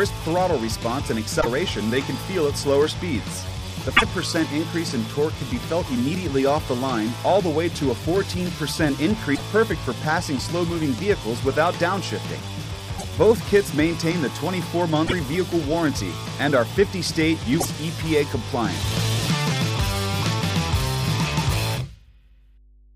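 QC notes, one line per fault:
1.40–1.47 s, 3.96–4.03 s, 9.34–9.41 s, 12.97–13.04 s, 15.06–15.13 s and 17.60–17.67 s: broken MP3 bit reservoir. At each point the audio jumps ahead, and roughly 70 ms comes out as a chirp, noise burst or short hole. The likely cause is MP3 frames cut from the stream. The frames that follow reach back for borrowed data and decode another frame's bytes instead. That span fits two to three frames of about 26 ms.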